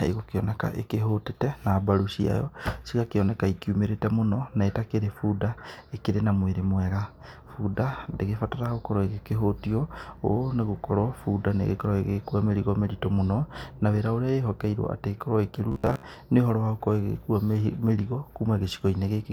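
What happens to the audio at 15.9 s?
Robotic sound from repeated short buffers runs from 15.72 to 16.03 s, between "atĩ ĩkorwo" and "nĩ ũhoro". Most of that stretch likely replays a roughly 15 ms buffer while fresh audio is skipped, forcing a rigid metallic buzz near 66.8 Hz onto the speech.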